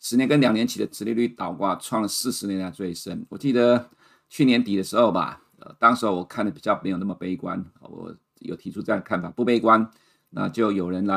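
At 2.21 s the speech drops out for about 4.4 ms. This is a block of digital silence: a run of samples was replaced by zeros. The sound cuts to silence and back with no fade. The gap is so short that it is heard as a tick.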